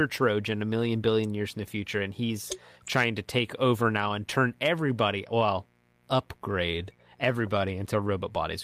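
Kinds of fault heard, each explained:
Mains buzz: Switching spikes from a 60 Hz supply leak into the signal path, adding a steady, raspy buzz about 35 dB below the speech throughout.
Clock drift between sender and receiver: The sender's audio clock runs roughly 2% slow, so the receiver's buffer keeps draining and small timing hiccups recur through the clip.
Repeated timing corrections: The receiver repeatedly stretches the audio to keep pace, playing it at 98% speed from 0.08 to 8.08 s and adding around 150 ms.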